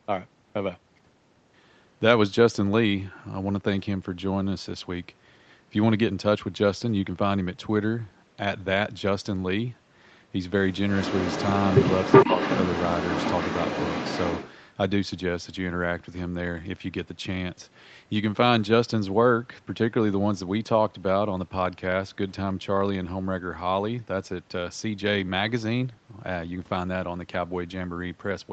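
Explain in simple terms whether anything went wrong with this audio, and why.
Yes, from about 10.9 to 14.56 seconds a second copy of the speech trails the original by roughly 0.38 seconds, and it is fairly loud, only a little quieter than the speech itself. This is likely an echo leak: someone on the call was using a loudspeaker, their microphone picked the sound back up, and the echo canceller didn't fully remove it. Room reverberation would blur into the speech, but this arrives as a separate, distinct repeat after a clear gap.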